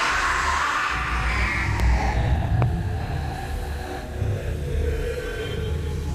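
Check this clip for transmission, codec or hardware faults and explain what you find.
Two loud pops are present in the audio. Loud pop, 1.80 to 1.82 s and 2.62 to 2.64 s: each is a single sharp pulse, roughly 15 dB above the surrounding sound. It is likely a sudden voltage step from a plug, switch, static or driver glitch added to the signal, while the sound carries on underneath.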